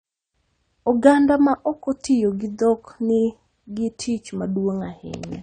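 It's a speech recording, and the whole thing carries the sound of heavy lossy coding, most likely AAC compression at a low bitrate, something in the region of 32 kbps. Nothing reaches above 9 kHz, so the top end is shaved off and everything sounds dull. The damage is plainly audible: sustained vowels pick up a watery warble and sibilants turn fizzy and smeared, since the encoder has too few bits to hold fine spectral detail.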